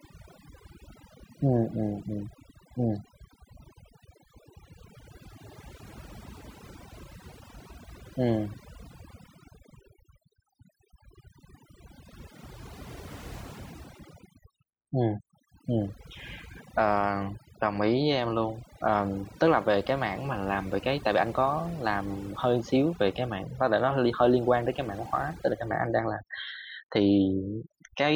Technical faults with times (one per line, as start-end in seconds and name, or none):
0.00-28.15 overdone noise removal